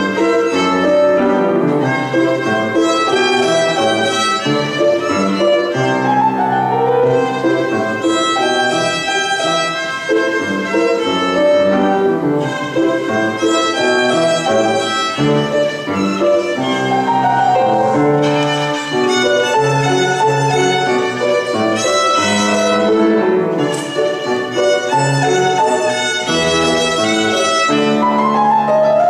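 No technical faults can be heard anywhere in the recording. Nothing in the sound points to a problem with how it was captured, carried or reproduced.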